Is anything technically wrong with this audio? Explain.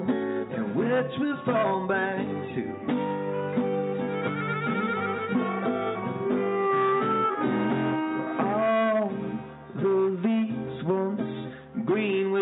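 No, nothing technically wrong can be heard here: the signal stays steady and intact throughout, with no audible defects at any point.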